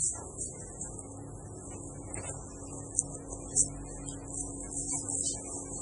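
Throughout the clip, the encoder was likely starved of bits under MP3 compression, in a way that points to a very low bitrate near 24 kbps. Nothing survives above 10.3 kHz, so the top sounds dull, and the heavy damage leaves a watery, swirling texture with smeared attacks.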